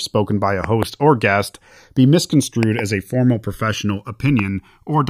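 From the start of the speech the two channels are drifting apart: they run on separate clocks that disagree by a few hundred parts per million, so the inter-channel delay grows steadily to around a millisecond by the end. Summed to mono, the resulting comb-filter notches sweep slowly down through the spectrum, and the voice takes on a gradual, slow flanging that changes character over the clip.

Five loud pops sit on top of the speech, each peaking about 15 dB above the signal. A double pop falls between 0.64 and 0.85 s, another pair between 2.63 and 2.81 s, and a single pop at 4.39 to 4.41 s. Each is a sharp transient. The speech continues unbroken beneath them. The likely cause is a voltage step or spike from a connector, switch, static discharge or driver glitch.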